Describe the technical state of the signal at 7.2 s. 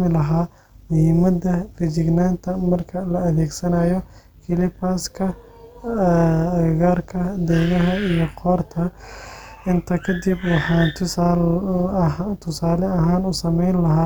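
At 7.2 s the speech carries overlap-add ripple, present across the whole clip: mismatched frame overlap makes the level pump by about 6 dB around 200 times a second, giving a metallic buzz.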